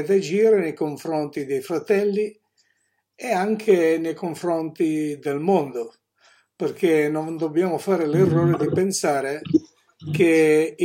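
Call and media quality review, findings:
No audible faults found on review; audio path intact throughout, nothing to flag or escalate.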